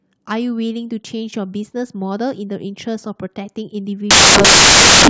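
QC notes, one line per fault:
4.11–5.10 s: samples built from the wrong bytes. The speech gives way to loud, harsh broadband noise through to the end, because the bytes of each sample are being combined in the wrong order or offset, so the rapidly varying low bits now dominate every value.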